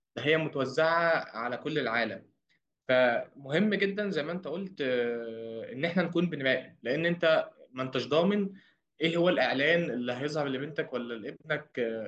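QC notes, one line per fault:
Nothing to flag on this speech recording, so no fault lines are needed here.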